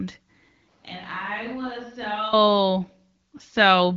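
From 0.69 s to 2.33 s the speech suddenly turns roomy and hollow, loses bass, and falls about 10 dB in level, with room noise coming up to around 30 dB below the speech. The likely cause is a switch to a distant microphone after the close one dropped out. A plain gain dip would not add reverberation or noise. The abrupt return at 2.33 s sits alongside the light coding haze of the AMR-WB HD Voice path throughout.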